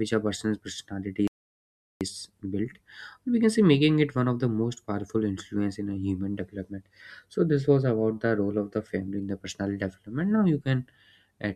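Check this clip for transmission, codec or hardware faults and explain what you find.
There is one fault, a playback stall. Right after "a person's personality" the speech cuts out mid-flow at 1.28 s and the output stays completely silent until 2.01 s, a gap of about 0.73 s, before the speech carries on. The likely cause is the player running short of buffered data, or its audio thread being held up, so nothing reached the output until it caught up and resumed.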